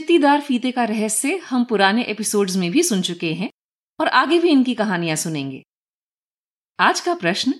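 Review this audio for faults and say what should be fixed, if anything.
Nothing stood out on listening to this speech, so there is nothing to fix.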